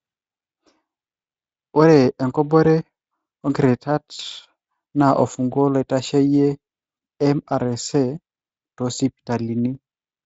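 Speech, coded with Speex at a light level of codec damage, has two brief stretched, smeared patches from 4.15 to 4.21 s and 6.97 to 6.99 s. This is VoIP packet loss concealed by the speech codec. The decoder stretches its last pitch and filter over gaps that point to roughly 40 ms and 20 ms of lost packets, then takes a moment to recover.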